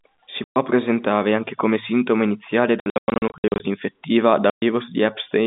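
Telephone-band speech, with G.711 coding audible as a line roughly 150 Hz to 3.7 kHz, is broken by packet loss filled with silence. A 120 ms hole runs from 0.44 to 0.56 s, just before "presentare anche come sintomo". After "anche come sintomo iniziale", scattered dropouts from 2.8 to 3.6 s remove 480 ms of the 800 ms, none longer than 100 ms. Another 120 ms gap falls at 4.5–4.62 s. The gap lengths fit 20 ms packets. Unlike concealed loss, nothing is repeated or faded in. Each hole is dead silence with hard edges.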